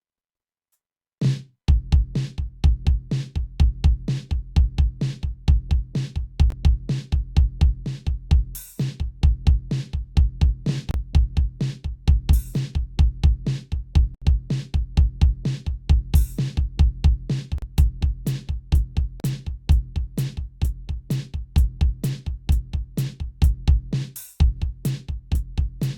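The music drops to silence at 6.50, 10.91–10.94, 14.15–14.22, 17.58–17.62 and 19.20–19.24 s, then carries on. That's most likely a Bluetooth stall, with the headphone buffer running dry.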